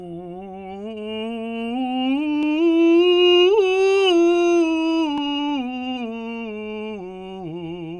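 No technical faults can be heard at any point in the music.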